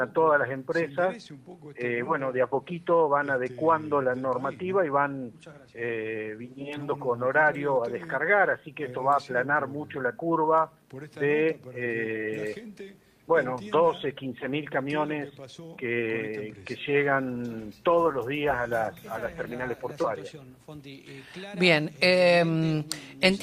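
No technical faults are audible.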